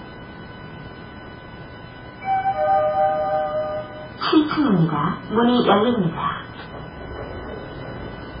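From start to end, the sound is dull and swirly, with the treble cut off and weak detail flickering watery, likely heavy MP3 compression at a very low bitrate, unlike a plain filter's steady dullness.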